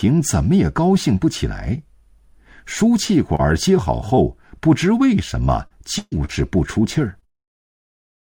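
Short concealed packet loss appears at 3.35, 4.15 and 5.67 s, and again at 6.25 s: each 20 to 40 ms hole was patched by extending the preceding sound, leaving brief smears or wobbles. At 5.98 to 6.19 s, a burst of packet loss drops about 140 ms; the concealment holds and fades the last sound before audio resumes further on. From 7.2 to 8.0 s, repeated packet loss (robotic sound) leaves six gaps, the longest 54 ms, giving choppy patching.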